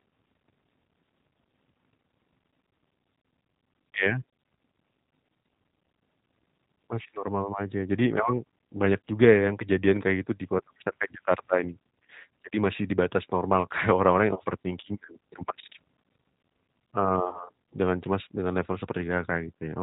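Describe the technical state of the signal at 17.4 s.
At 17.4 s the sound sits inside a VoIP packet loss concealed by the speech codec, spanning 17.29 to 17.44 s. About 40 ms of audio went missing, which fits two lost packets. The decoder repeated its last pitch and filter at falling gain, giving a buzzy tone or coloured noise that fades. On a spectrogram the harmonics freeze into flat horizontal bands that dim; the waveform shows a repetitive, shrinking periodic pattern before recovery.

This sits on top of G.729 coding at 8 kbit/s, plainly audible as a rough, synthetic edge. A spectrogram shows a hard ceiling with no energy above 4 kHz, and the harmonic structure looks coarse and slightly blurred from the pulse-based excitation.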